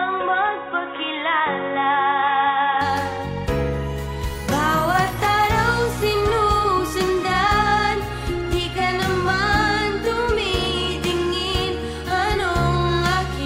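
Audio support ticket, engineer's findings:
Dull, boxy sound from 0.0 to 2.81 s, nothing above 3.8 kHz, faint new background noise, no level jump or gap at the change. Likely input switched to a poorer device, a narrower-band mic or headset call profile.

Irregular crackle bursts at 5.08–5.26 s and 10.56–10.66 s. Loose connector crackle: worn or dirty contact making and breaking under movement, chopping the signal into scratchy crackle.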